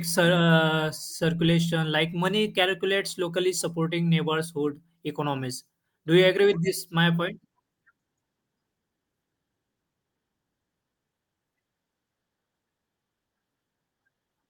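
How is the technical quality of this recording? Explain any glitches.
No glitches can be heard anywhere in the recording, and the speech signal stays intact and continuous throughout.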